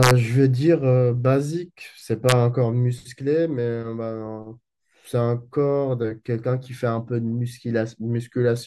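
Violent, sharp cracks hit the speech twice, far harsher than ordinary clipping: first from 0.03 to 0.11 s, then from 2.29 to 2.32 s. This is integer overflow. The loudest peaks went past the largest integer the path could hold and wrapped around to the opposite sign, so each sample jumped across the full range. The overshoot is small, about 1 dB in the first event and about 0 dB in the second, yet each wrap still snaps.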